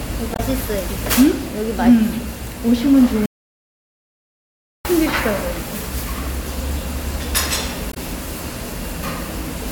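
Damaged data in a compressed stream shows up twice in this recording of everyday sounds, from 0.33 to 0.40 s and again from 7.90 to 7.97 s, each a brief blip of about 70 ms. At both points part of the compressed data was corrupt, so the decoder could not read those frames properly, lost its place in the stream and skipped ahead to the next valid frame header, producing a short chirp, click or hole. An audio dropout to silence runs from 3.26 to 4.85 s, where the sound cuts off abruptly and about 1.59 s of silence follows, with no background or room tone at all, before the sound returns mid-flow. The likely cause is a momentary loss of the input signal, such as a disconnected device or failed link, while recording continued and wrote silence, so whatever sounded during that gap is lost.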